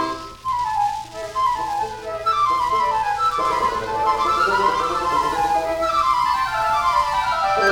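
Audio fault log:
3.45 s to end, doubled audio track: the same signal is most likely being picked up twice, once through a slower second path that runs about a tenth of a second behind the first. From 3.45 s the sound gains a full-band copy at roughly the same level as the original, trailing by that fixed gap with no decay or room colour. The copy cuts in abruptly and runs to the end of the clip.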